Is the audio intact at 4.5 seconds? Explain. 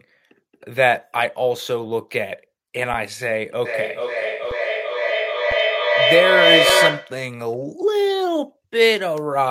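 No. There's a brief underrun with held sample at 4.51 s: the output buffer ran dry for about 5.8 ms, which fits a 256-sample block. The converter froze on its last value, so the waveform flatlines and then resumes where it left off, giving only a soft tick.

That tick sits inside a feedback echo between two devices, running from 3.66 s to 7.29 s. One device plays back what the other's mic sent, and that mic picks it up again. Each bit of speech returns every 400 ms or so, thinner and ringier each pass. The loop peaks about 4 dB above the speech itself, so the repeats stack up rather than fading out.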